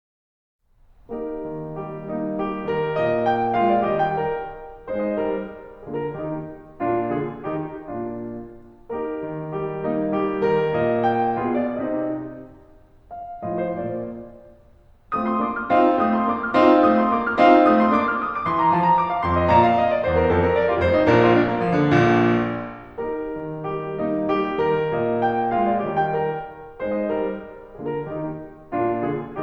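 Nothing technical stands out in this piece of music; there's nothing here to flag.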